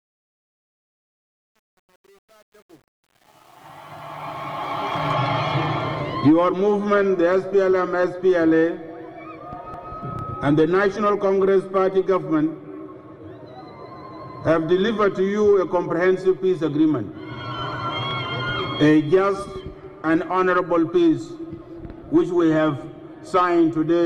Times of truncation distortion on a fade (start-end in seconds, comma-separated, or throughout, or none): 0.00-5.12